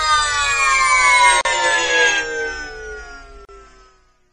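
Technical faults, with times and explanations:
1.41 to 1.45 s and 3.45 to 3.49 s, gap at a join of encoded pieces: the sound falls silent for about 39 ms and then 38 ms, recurring every 2.0 s, and resumes exactly where it stopped. This fits separately encoded pieces joined untrimmed, with encoder start delay and last-frame padding left in. Unlike a dropout, nothing is lost; silence is inserted at regular seams, with its edges smeared by the codec.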